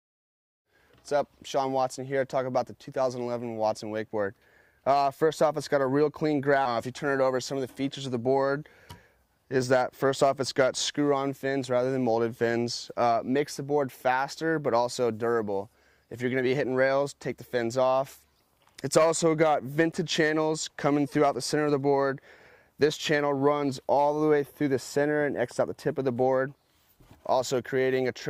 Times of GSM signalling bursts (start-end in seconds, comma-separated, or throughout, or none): none